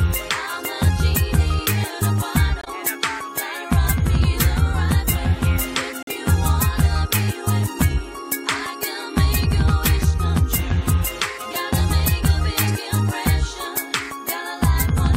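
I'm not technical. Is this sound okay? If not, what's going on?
No. There are two sudden silent gaps, at 2.61 to 2.68 s and 6.03 to 6.08 s. Each is a corrupt frame muted: damaged data was dropped and replaced with silence.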